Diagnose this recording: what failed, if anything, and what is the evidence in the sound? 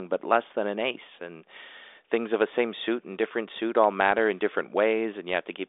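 Nothing failed, and the sound gives no evidence of a fault.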